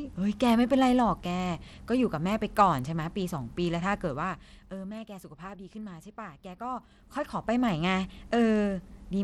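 A speech clip, carried throughout by what is likely Bluetooth SBC compression at a low bit pool, fitting roughly 96 kbps, which starves the upper sub-bands, so the treble thins and flickers under gritty, aliased noise.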